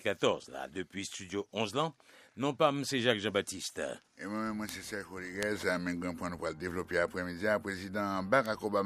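Bit error spikes occur at 4.69 s, 5.43 s and 8.46 s, each a single sharp tick standing apart from the surrounding sound. In each, a flipped bit in a stored or transmitted sample has made the value jump by a power of two before it snaps straight back. The clicks are broadband and unrelated to the signal, peaking at about -12 dBFS for the first two and about -18 dBFS for the last. The one at 5.43 s spans a short run of three consecutive corrupted samples rather than one.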